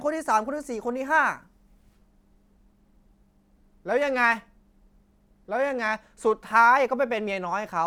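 Nothing in the speech here points to a technical fault; it all holds together just as it should, so there's nothing to flag.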